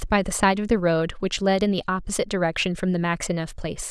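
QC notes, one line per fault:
No faults heard anywhere in the speech.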